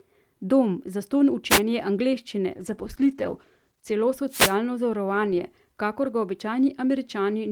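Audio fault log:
1.49–1.60 s and 4.28–4.56 s, wireless microphone noise hit: two brief swishes of static, the second longer, as the analogue FM radio link fades and receiver noise rises over the speech. On a spectrogram each shows as a broadband vertical smear; on the waveform it is a fuzzy burst riding over the speech envelope.
2.56–4.01 s, call bitrate drop: the speech turns rough and muffled as the encoder is squeezed onto far fewer bits, consistent with a fall from about 32 to 13 kbps, held near the low point for roughly 1.4 s. A spectrogram shows the upper band cut away and blotchy, coarse harmonics until the bandwidth returns.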